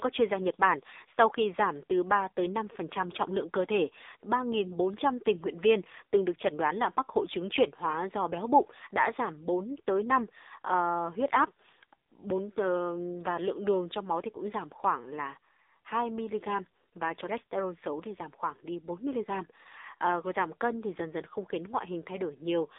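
From start to finish the speech sits in an AMR narrowband mobile codec: a 300 Hz to 3.7 kHz phone band, nothing above 3.8 kHz, and heavy buzzy, synthetic smearing from the pulse-driven vocal-tract model, which fits a low mode around 6.7 kbps.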